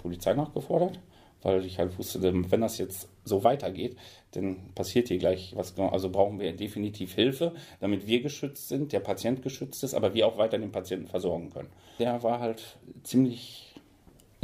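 Nothing in the audio registers as a technical fault at any point.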